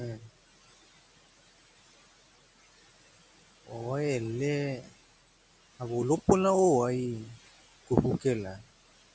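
Noise suppressor artifacts run throughout this speech: frame-by-frame cutting of bands judged steady noise, by about 17 dB, makes the room noise dip between phrases and swell underneath.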